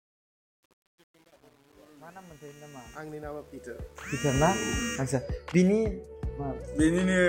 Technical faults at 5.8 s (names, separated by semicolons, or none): none